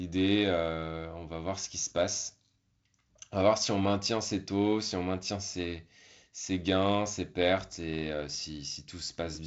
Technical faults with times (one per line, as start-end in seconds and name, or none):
none